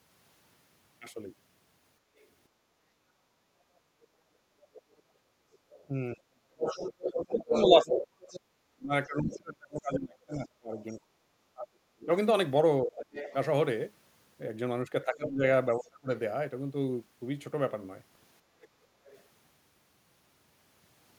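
From 2.01 to 5.61 s, the background is gated by the echo canceller. The room sound dips by about 9 dB, for roughly two seconds in all. The canceller heard its loudspeaker playing and turned the microphone down. The room tone returns when it releases.

From 2.17 to 19.23 s, a second voice comes through under the talker. It sits roughly 5 dB below the main speech. This is the other side's voice leaking through. The likely cause is loudspeaker sound the echo canceller failed to remove from the microphone.

From 5.89 to 16.11 s, the talker's own speech drops out in pieces while the other side is audible. The deepest dips are around 35 dB, about five seconds in total. This is speech suppressed in double talk. The canceller likely could not separate the two voices and turned both down.

From 18.42 to 18.8 s, the background is gated by the echo canceller again. The room sound falls by about 8 dB for a fraction of a second. 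Then it comes back.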